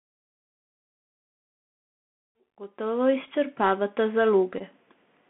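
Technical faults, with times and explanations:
Throughout, Bluetooth CVSD headset codec: sound is confined to roughly 200 Hz to 3.5 kHz, with plainly audible granular hiss and scratchy sibilants as the adaptive one-bit step lags fast changes.
3.26 s and 4.58–4.62 s, Bluetooth headset packet repeated: lost packets were replaced by decoding the previous packet again, about 11 ms then 15 ms, giving a brief 267 Hz buzz.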